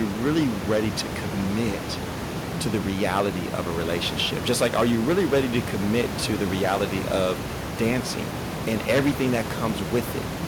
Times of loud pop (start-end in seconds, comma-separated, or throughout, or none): none